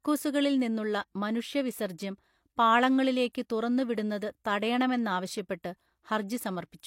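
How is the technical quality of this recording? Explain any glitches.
There's one glitch worth flagging: a pre-echo at about 3.33 to 3.35 s in the speech. The codec's block-wide quantisation noise, sized for a sharp attack, leaks into the quiet moment before it, so you get roughly 21 ms of hiss ahead of the onset, which sounds smeared.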